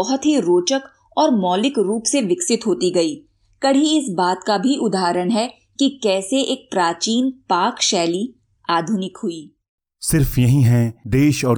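Nothing stood out on listening to this speech recording.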